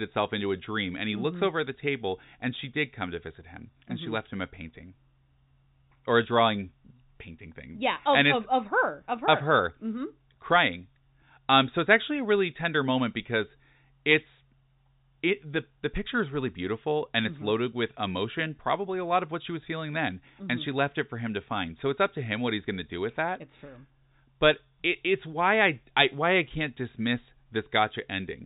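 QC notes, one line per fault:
Nothing to flag here, just speech with the familiar narrow phone-line character of G.711 telephone coding and no faults turning up anywhere along the way.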